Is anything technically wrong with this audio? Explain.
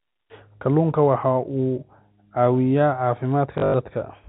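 Yes. From 3.58 to 3.74 s the speech breaks into a brief robotic stutter with a 50 Hz buzz, which fits 20 ms packets. This is packet loss with last packet repeated: about 140 ms went missing across those 160 ms, the longest gap 100 ms, and the receiver replayed the last packet over the telephone-band G.711 audio.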